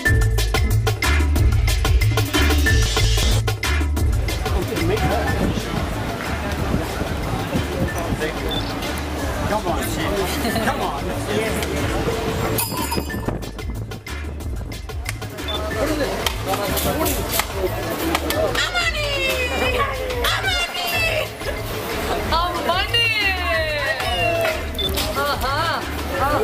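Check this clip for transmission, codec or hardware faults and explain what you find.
There are two spots where frames arrive out of order, at 2.86 to 3.23 s and 4.62 to 5.00 s. In each, two neighbouring blocks of about 186 ms get swapped, which fits pairs of frames trading places. The sound turns into a garbled flutter, though no time is lost.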